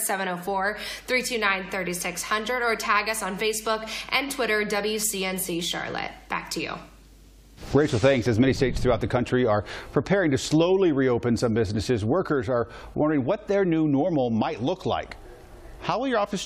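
From 0.45 s to the end, a steady mains hum sits under the sound: 50 Hz power leaking in through a ground loop or nearby transformer, roughly 30 dB below the signal. Unlike wind or handling rumble, it holds one fixed pitch and never varies.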